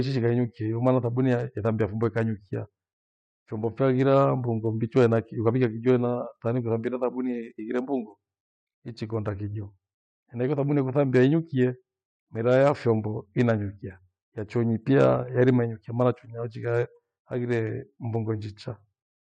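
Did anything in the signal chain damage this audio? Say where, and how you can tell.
No, nothing in the chain audibly damaged this speech.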